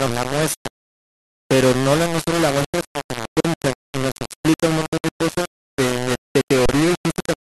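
The whole speech clip is coarse and gritty. That's low bit depth without dither, likely rounding to about 3 bits, with distortion nearly as loud as the speech itself.

At 3.40 s there's an underrun with held sample. The waveform freezes flat for about 43 ms, which fits a 2048-sample buffer, then the sound comes back with roughly 40 ms of audio skipped. The same thing happens at 6.66 s for 32 ms, with around 30 ms lost.

Between those, at 6.41 s, a digital broadcast dropout fades the sound to silence within 3 ms for 64 ms. That's consistent with two dropped frames, and what was sent during the hole is gone.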